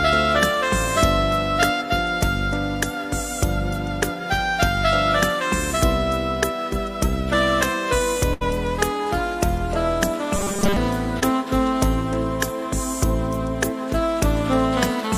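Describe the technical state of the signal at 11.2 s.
Right around 11.20 to 11.23 s there's a short concealed packet loss. About 20 ms of audio didn't arrive in time, so the decoder patched roughly 17 ms of it by carrying the preceding sound forward, following its pitch if it had one or using shaped noise if not, then crossfaded back into the real signal. What you hear is a quick smear or tiny wobble, and anything very brief at that instant can just drop out.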